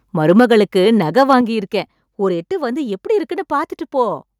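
From 0.29 to 0.54 s the loudest syllables take on a harsh crackle, likely microphone overload: peaks push about 4 dB past the converter's limit, so the waveform shows flat-topped tops and the spectrogram shows smeared high-frequency splatter. At 0.4 s voice and background drop together by about 2 dB in one step, likely the microphone volume being stepped down after the distorted peak; the waveform envelope shrinks abruptly. From 1.17 to 1.34 s the overload returns, about 2 dB over, likely from the same cause, with roughly 2% of samples flattened. At 1.41 s a larger step down of about 5 dB follows, likely another automatic input-volume cut, showing as a clear drop in waveform height.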